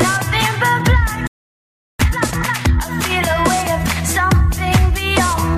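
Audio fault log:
1.27–1.99 s playback stall. The sound stops dead and stays silent for 0.72 s, then resumes. The player likely ran dry or was blocked.
1.99–2.71 s time-compressed catch-up. The audio plays at twice normal speed with unchanged pitch. Small slices are cut and cross-faded.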